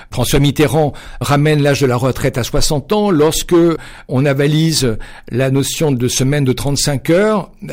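From start to finish the speech is hit by hard clipping: the signal runs about 8 dB hotter than the stage can pass, so its peaks are sliced flat, with a few percent of samples sitting at the ceiling. Those square tops spray harmonics high into the spectrum, giving a gritty crackle on louder syllables. Unlike soft saturation, which rounds peaks into warm thickening, this breaks up abruptly and sounds brittle right at each peak.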